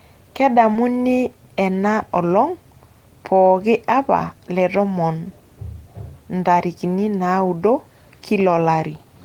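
At 0.73 to 0.77 s there is a short concealed packet loss. About 20 ms of the speech arrived too late for the decoder or never arrived, so the receiver synthesised a replacement by extending the preceding signal, carrying on its pitch where voiced or substituting shaped noise where unvoiced. It then crossfaded back into the received audio. The patch is heard as a brief smeared or wobbling instant in the speech.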